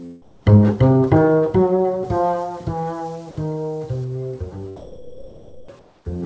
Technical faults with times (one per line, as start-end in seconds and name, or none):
0.22-0.46 comfort noise in place of the background
2.04-4.04 pre-emphasis left on
4.76-5.68 sound dropped by the voice detector
5.79-6.05 comfort noise in place of the background